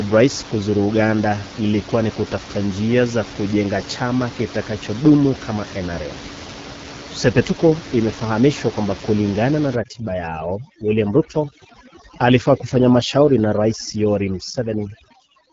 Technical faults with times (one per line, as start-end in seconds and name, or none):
0.00-15.52 AMR wideband (HD Voice) codec
9.75-15.52 overdone noise removal